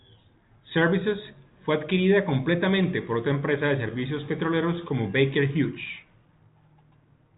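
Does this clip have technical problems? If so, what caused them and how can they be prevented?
No, nothing in this speech stood out as a technical problem on listening, so there is nothing here that needs preventing.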